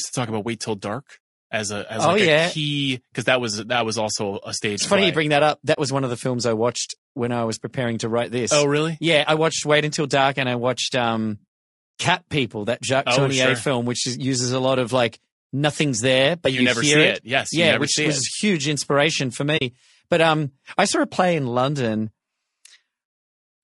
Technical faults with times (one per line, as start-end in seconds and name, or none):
0.00-23.64 low-delay AAC compression
5.73-5.78 AAC frame loss with muting
19.57-19.62 AAC frame loss with muting